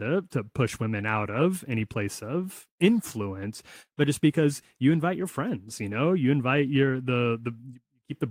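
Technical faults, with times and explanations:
2.41–2.43 s, 4.05–4.07 s, 5.21–5.23 s: lost packet rebuilt from error correction. Brief rough, noisy 20 ms patches without gaps, each fitting one lost packet replaced by the next packet's low-bitrate copy.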